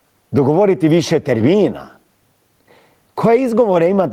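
Across the whole clip, this speech recording breathes audibly: the level is pulled down as each loud syllable arrives, with the level swinging by around 10 dB. Loud and quiet passages sit unnaturally close together, giving a squashed, pumping quality. This is gain pumping, likely caused by the input gain being set far too high for the microphone, with a fast limiter or compressor clamping down on every peak.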